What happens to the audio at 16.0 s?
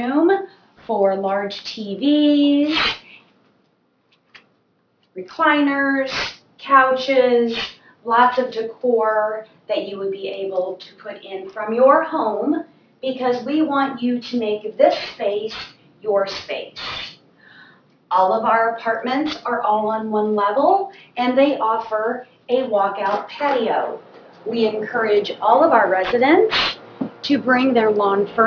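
At 16.0 s, as throughout, aliasing: content above a 5.5 kHz fold, consistent with an unfiltered drop to about 11 kHz, mirrors back as gritty, metallic tones; a spectrogram shows energy jammed against 5.5 kHz.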